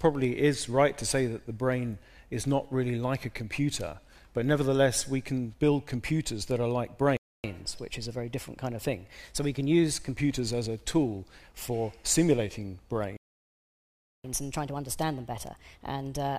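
The audio cuts to silence twice, from 7.17 to 7.44 s (0.27 s) and from 13.17 to 14.24 s (about 1.07 s). These are playback stalls, likely from the player running out of buffered data or its thread being blocked. Each gap is followed by catch-up at higher speed, where the audio runs fast and sharp. From 7.44 to 10.16 s it plays at 1.1 times speed, about a semitone and a half high. From 14.24 s to the end it plays at 1.25 times speed, roughly four semitones high. The player is resampling its backlog to win back the time lost in the silence.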